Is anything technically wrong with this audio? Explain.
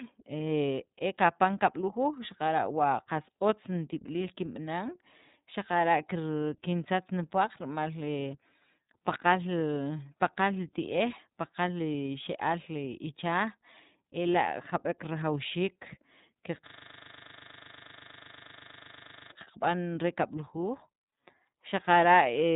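Yes, there are two faults.

Throughout the clip, iLBC codec damage is plainly audible. The speech is cut off above 3.8 kHz and has a slightly rough, synthetic grain. That comes from the codec rebuilding each 30 ms frame's excitation on its own, and the quality points to the 13.33 kbps mode. A simple low-pass filter would dull the sound without adding that grain.

From 16.67 to 19.32 s there is a system hang loop. A single 40 ms slice of audio repeats identically about 66 times while the hardware keeps cycling one buffer, which produces a steady 25 Hz buzzing stutter. A network dropout would leave gaps or smeared sound, but this is exact repetition with no silence between copies.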